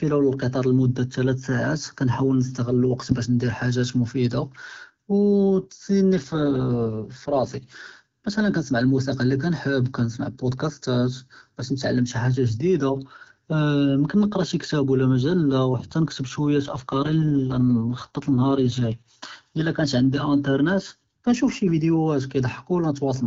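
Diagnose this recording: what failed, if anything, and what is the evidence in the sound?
An AMR rate drop at the codec, driven by the network link: from 6.17 to 7.73 s and from 16.65 to 19.09 s the speech turns rough and synthetic without gaps or band loss, which fits a fall from 12.65 to 6.6 kbit/s. On a spectrogram, harmonics blur into noisier texture while the bandwidth holds.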